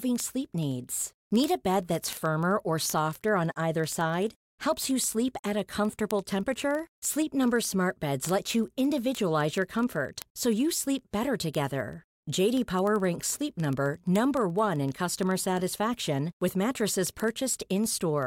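A speech clip with word clock ticks from 0.12 s to 18.27 s. Sharp ticks recur about every 40 ms, some four hundred in all. The receiving device runs unlocked to the sender's clock, off by roughly 500 ppm, so one sample slips at each crossing.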